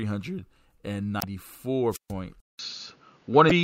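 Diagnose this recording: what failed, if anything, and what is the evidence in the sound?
Damaged data in a compressed stream, at 1.19–1.24 s and 3.47–3.52 s: a codec-stage fault where corrupt frames make the decoder lose sync, giving brief faults of about 50 ms and 40 ms.

Wireless microphone squelch dropout, 1.90–2.13 s: in the analogue radio link, fading signal trips the receiver's squelch, muting the speech for about 140 ms amid hiss.

Input switched to a poorer device, from 2.40 s to the end: a short silence of about 190 ms, then duller speech with nothing above 6.8 kHz, a level shift of roughly 5 dB and background noise roughly 40 dB below the speech, likely a driver-level change to another microphone.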